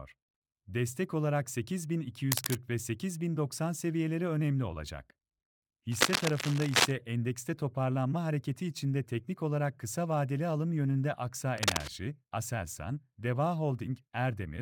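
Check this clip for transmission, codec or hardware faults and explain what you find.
Three bursts of cable scratch noise sit on top of the speech. They run from 2.32 to 2.56 s, from 5.92 to 6.91 s, and from 11.58 to 11.88 s. The middle one lasts about a second. Each is a dense, ragged rustle, roughly as loud as the speech itself. The likely cause is a worn cable or connector being moved. Its contact resistance jumps about rapidly, injecting uneven noise while it shifts.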